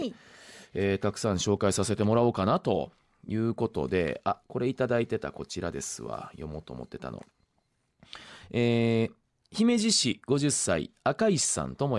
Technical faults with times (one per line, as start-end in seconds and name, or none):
none